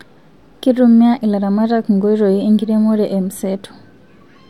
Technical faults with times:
none

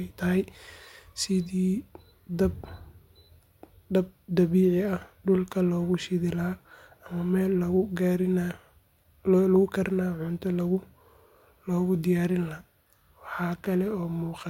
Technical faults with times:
none

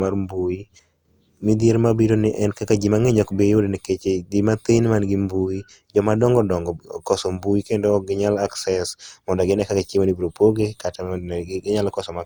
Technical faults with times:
0.00-12.26 generation loss

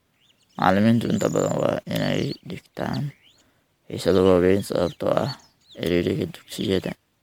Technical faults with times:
0.00-7.22 generation loss

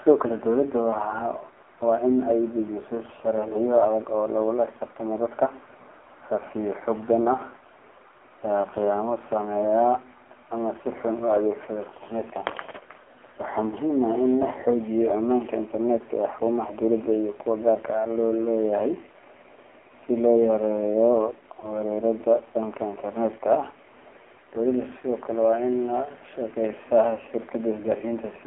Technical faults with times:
0.00-28.46 AMR narrowband mobile codec
21.60-21.83 lost AMR speech frames

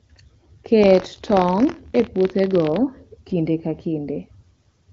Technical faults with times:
0.81-2.78 buffer tearing

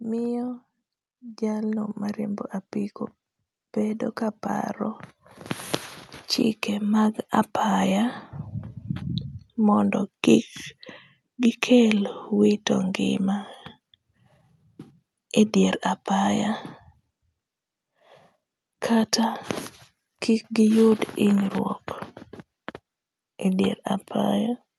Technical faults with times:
0.07-13.28 automatic gain rising

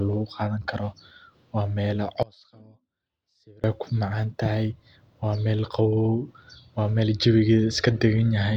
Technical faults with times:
2.23-3.64 one channel inverted

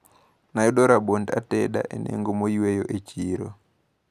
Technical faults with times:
none

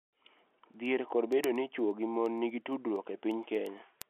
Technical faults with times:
0.15-4.02 word clock ticks

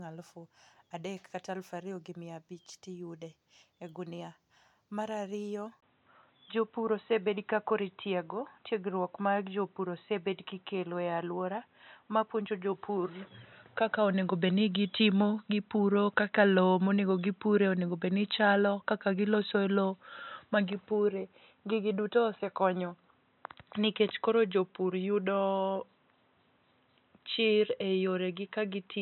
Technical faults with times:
5.80-29.01 input switched to a poorer device

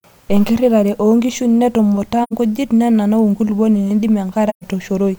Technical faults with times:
2.23-2.33 AAC frame loss with muting
4.49-4.65 AAC frame loss with muting

